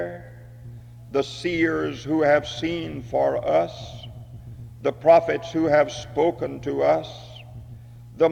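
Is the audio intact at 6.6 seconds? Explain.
Yes, the audio is intact at 6.6 seconds, with no dropout, click, distortion or other fault audible at that point.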